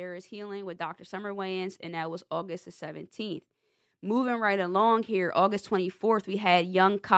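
From 0.29 s until the end of the speech at 7.17 s, the automatic gain control keeps pushing its gain upward, having judged the incoming level too low. It never settles, so the level climbs throughout instead of holding steady. Voice and background noise rise together in a slow, continuous swell, making the room sound louder alongside the talker. The call path's band limit is audible as a top end that stops near 8 kHz.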